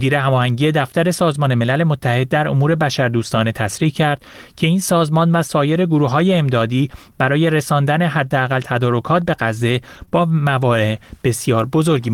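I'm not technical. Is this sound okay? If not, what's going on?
No. Around 9.97 to 10.03 s there is a lost packet rebuilt from error correction: a brief stretch, roughly 40 ms, which points to two lost packets, was replayed from a rougher backup copy sent along with the next packet, so it sounds briefly grainy and noisy rather than cutting out.

Right after, at 10.05 s and again from 10.09 to 10.14 s, there is short concealed packet loss: two small chunks never arrived in time, and the receiver covered each by stretching the preceding sound, giving a quick smear or wobble instead of silence.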